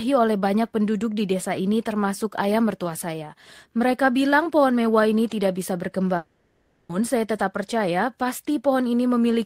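Right after "mewah ini tidak bisa", at about 6.17 s, the speech stops moving forward and the last sound gets stretched into a buzz or hiss that fades, running to about 6.91 s. That's a likely long network dropout: nothing new arrived, so the receiver kept extending what it had for the whole 0.72 s gap, with no stretch of plain silence. When audio comes back at "saya tetap percaya", that missing chunk is simply gone.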